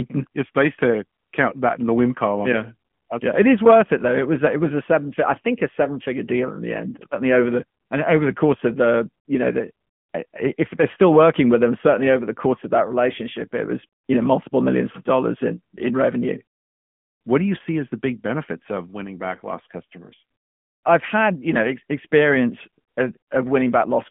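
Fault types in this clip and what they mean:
AMR narrowband mobile codec, throughout the speech: the voice has been squeezed through the mobile speech coder, which samples at 8 kHz and rebuilds the voice from a vocal-tract model fed by sparse pulses on a 20 ms frame. Here nothing survives above 3.6 kHz, the band sits roughly between 150 Hz and 3.4 kHz, and the buzzy, synthetic edge is plainly audible, which fits a mid-range mode around 10.2 kbps.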